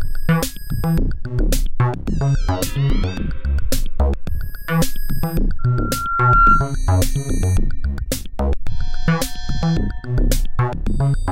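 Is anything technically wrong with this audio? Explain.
Yes, there's a loudspeaker feedback squeal from about 5.59 to 6.74 s. A mic was picking up the speaker it was feeding, and at 1.4 kHz the loop gain went past one, so that frequency kept reinforcing itself on every trip around. You hear a single tone that creeps up over roughly a second and swells into a squeal, ending up around 5 dB louder than the rest of the sound before it cuts off at 6.74 s.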